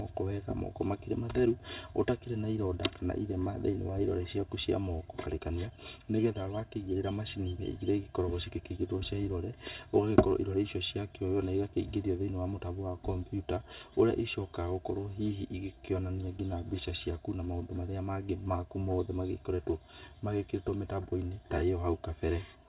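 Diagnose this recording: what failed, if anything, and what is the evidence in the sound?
Channel delay (comb filtering) at the wiring or mixing stage throughout: one channel arrives roughly 3 ms late, so the mono sum sounds hollow. A spectrogram shows fixed, evenly spaced notches from around 150 Hz.

A skip ahead at 5.26 s, a network or jitter-buffer fault, drops about a second of speech. The waveform joins directly, with no gap, and the spectrogram shows an abrupt discontinuity.

A jitter buffer speed-up from 5.39 to 7.01 s plays at 112% with unchanged pitch, trimming about 200 ms. The waveform shows compressed syllable spacing, while spectrogram harmonics stay level.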